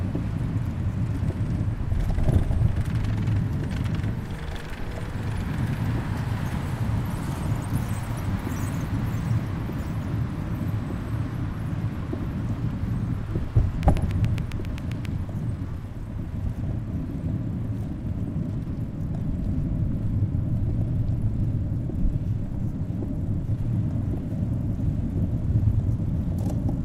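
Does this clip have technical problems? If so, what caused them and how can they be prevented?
Yes, there's a train of clicks from 13.83 to 15.06 s: about ten evenly spaced ticks at 7.4 per second, peaking roughly 10 dB above the sound, likely interference from nearby gear. Keep cables away from noisy equipment and check the interface's connections.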